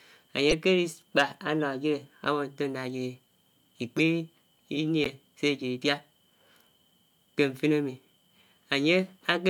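At 0.50 to 0.53 s, 3.98 to 4.00 s and 5.03 to 5.09 s, short chirpy bursts cut into the speech. Each is a corrupt frame decoded. Damaged bits sent energy to wrong frequencies. The first and last are loud, the middle one softer.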